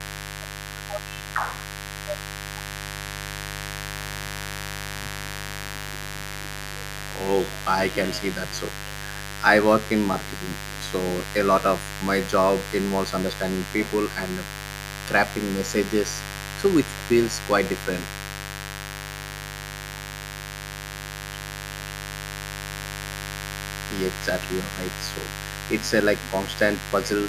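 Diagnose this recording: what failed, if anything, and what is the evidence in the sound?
Analogue wiring failed: a raspy mains buzz runs throughout, about 10 dB below the speech, from switching spikes entering twice per 50 Hz cycle, spraying harmonics into kilohertz.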